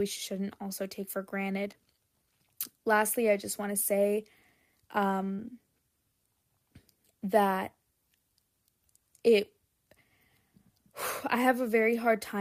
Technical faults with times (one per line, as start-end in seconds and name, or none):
1.71-1.75 short concealed packet loss
5.35-5.51 short concealed packet loss